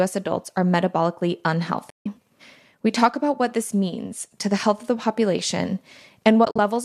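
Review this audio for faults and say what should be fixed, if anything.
The speech drops into two soft-edged silences, fading out and back in, from 1.90 to 2.06 s (about 160 ms) and from 6.45 to 6.59 s, where roughly 90 ms of gaps are scattered, the longest around 50 ms. This is AAC frame loss with muting. Whole short frames, consistent with 10 ms frames, went missing, the decoder zeroed their spectrum, and the overlapping windows smoothed the edges. The light roughness heard throughout likely comes from low-delay AAC compression and is not a fault. To prevent the dropouts, protect the stream with forward error correction or retransmission, or enable decoder concealment that extrapolates from neighbouring frames instead of muting.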